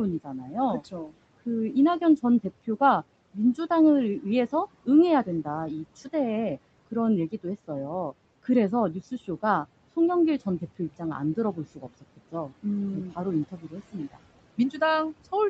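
Speech cut by the noise suppressor at 0.24–0.56 s, 0.8–1.17 s, 12.01–12.65 s and 13.51–13.95 s: the suppressor mistook speech for background and pulled it down by about 14, 19, 18 and 14 dB, so syllables sound swallowed. On the waveform and spectrogram these show as sudden dips lasting roughly a fifth of a second, with the energy thinned across the whole band.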